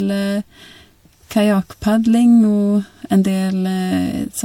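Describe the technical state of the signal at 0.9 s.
At 0.9 s the speech carries generation loss, present across the whole clip rather than starting or stopping near this point. The sound is swirly and hollow, with smeared consonant onsets and a watery texture beyond what a single lossy pass would give. That fits repeated MP3 coding at around 96 kbit/s, likely through about four decode and re-encode cycles, each quantising on a shifted frame grid so that noise and spectral gaps accumulate.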